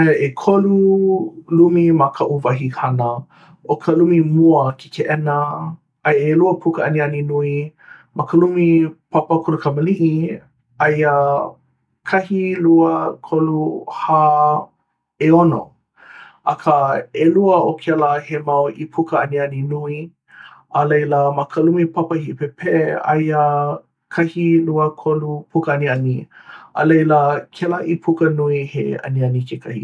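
A recording of speech, with no technical fault to be heard anywhere in it. Nothing calls for a time or a cause.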